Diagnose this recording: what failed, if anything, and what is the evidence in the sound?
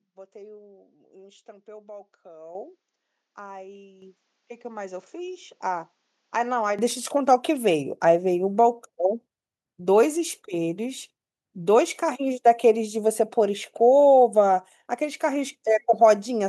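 At the input stage, the recording most likely starts on a poorer input device, such as a second microphone or a headset's call profile, until 6.79 s. There the speech is boxy and narrower in band, roughly ten dB quieter, and carries a faint different noise floor. At 6.79 s it opens up cleanly, with no gap.

In call processing, the automatic gain control judged the microphone too quiet and raised the device's input volume as a microphone volume step-up. Speech and background jump up together at 2.55 s by about 9 dB and again at 4.02 s by about 7 dB, each abruptly.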